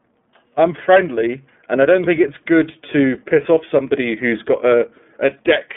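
Throughout the speech, the iLBC codec is plainly audible: nothing passes above roughly 3.5 kHz, and each 30 ms frame is coded independently, giving a rough, synthetic grain. A plain narrowband line would lose the top without this coded graininess. The rate points to iLBC's 13.33 kbps mode.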